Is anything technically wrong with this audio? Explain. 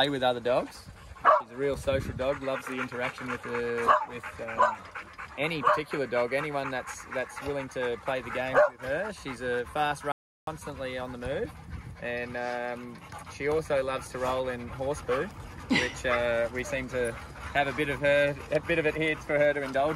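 Yes, there's an audio dropout to silence from 10.12 to 10.47 s. For about 0.35 s the sound cuts out completely, no room tone at all, then resumes. The input was likely lost briefly while the recorder kept writing silence, so that stretch is simply gone.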